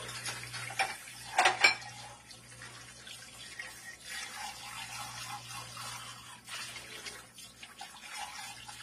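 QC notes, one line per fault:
Throughout: AAC compression. The sound is dull and smeared, with the top end cut away and a warbling, fizzy texture on sustained and noisy passages. The likely cause is lossy AAC-LC coding at a low bitrate, with the damage level fitting roughly 32 kbps. The encoder lowered its cut-off and starved some bands to fit the budget, leaving holes or substitute noise behind.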